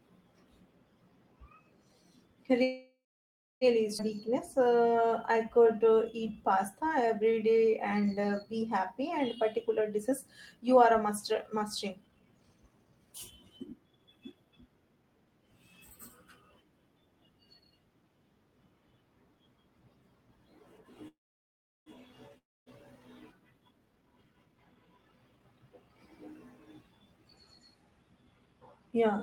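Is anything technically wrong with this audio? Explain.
Yes. The speech shows several network and jitter-buffer faults: two call audio freezes, a skip ahead, a jitter buffer slow-down, three jitter buffer speed-ups and a long network dropout.

Call audio freeze, 2.63 to 3.64 s and 21.08 to 21.89 s: packets were likely held up in transit and the jitter buffer ran dry. The receiver stretched the last sound into a fading buzz, then near silence for about 0.65 s and 0.73 s respectively. Speech resumes where it stopped, with nothing missing.

Skip ahead, at 3.97 to 4.02 s: right after the first freeze, the buffer discarded roughly 0.7 s of queued audio to recover the added delay. The speech jumps abruptly forward, with the two sides joined almost seamlessly and a chunk of content gone.

Jitter buffer slow-down, 4.16 to 9.19 s: with its reserve low, the receiver repeated single pitch periods and pause fragments over and over, adding about 0.47 s. 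Speech plays at roughly 91% speed at unchanged pitch, sounding drawn out.

Jitter buffer speed-up, 9.43 to 15.18 s, 23.40 to 26.35 s and 27.07 to 29.14 s: the buffer held too much audio, so the receiver cut short pitch-period pieces. This removed roughly 0.7 s, 0.5 s and 0.15 s, running speech at about 113%, 118% and 106% speed with unchanged pitch, hurried in places.

Long network dropout, 22.38 to 22.69 s: packets likely never arrived for this stretch. The last sound fades into a buzz, then about 0.25 s of silence follows before speech returns further on, with about 0.28 s of content lost.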